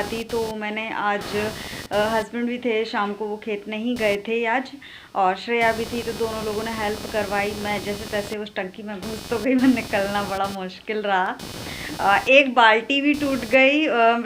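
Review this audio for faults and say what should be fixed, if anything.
Computer activity noise runs throughout, a buzzy chirping pulsing around 300 Hz, roughly 15 dB below the signal, as processor and graphics load shift the shared ground. Unlike steady mains hum, it rises and falls with the computer's activity rather than holding constant. Prevent it by isolating the audio ground, using an external interface with a ground-loop isolator or balanced connections away from the computer's supply.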